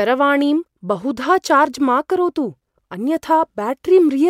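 No technical faults can be heard anywhere in the speech recording, and the signal holds steady throughout.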